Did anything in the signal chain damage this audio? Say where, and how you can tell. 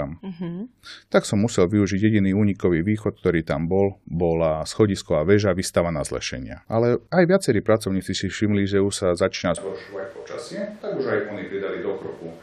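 Yes. From 9.58 s to the end, the speech abruptly turns hollow and roomy, about 10 dB quieter, with noise roughly 25 dB below it. This is likely a switch to a distant microphone at capture. A spectrogram shows thinned lows; the waveform steps down.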